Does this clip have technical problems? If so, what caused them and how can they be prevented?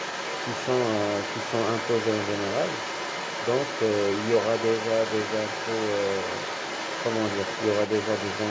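Yes. The other side's voice is leaking through from 0 to 8.5 s, a second, quieter voice roughly ten decibels below the speech. The likely cause is an echo canceller that failed to remove loudspeaker playback from the microphone. A spectrogram shows overlapping harmonic stacks. Using a headset, or tuning the echo canceller, would prevent it.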